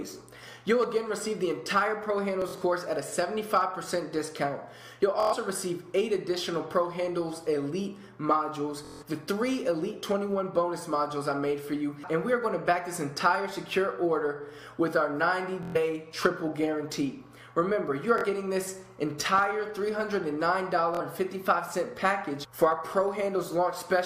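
Packets on a Bluetooth link arrived late or not at all at six points, and each time the receiver kept replaying its last buffer until fresh data came, giving Bluetooth stutter: a short slice of audio repeats as a rapid buzz, then playback resumes further on, as if the gap had played through. It happens at 2.42 to 2.62 s, 5.20 to 5.34 s, 8.85 to 9.03 s, 15.63 to 15.76 s, 18.18 to 18.25 s and 20.95 to 21.01 s. About 116 ms goes missing in the first, second and fourth, 162 ms in the third and 46 ms in each of the last two. Those amounts are multiples of roughly 23 ms, which points to packets of about that length. In the first event the losses are spread over about 186 ms, with the longest unbroken run 46 ms. Separately, a sudden voltage step or pulse, likely from a plug, switch, static discharge or driver glitch, was added to the signal between 19.38 and 19.40 s. It is heard as a single loud pop about 10 dB above the surrounding sound, with the audio carrying on underneath.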